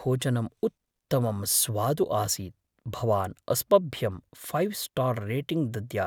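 A short recording of speech, with no technical fault to be heard anywhere in it. Nothing calls for a time or a cause to be given.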